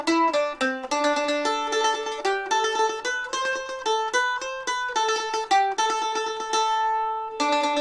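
Nothing goes wrong anywhere in this one; there's no glitch, dropout or distortion to point to at any moment in the audio.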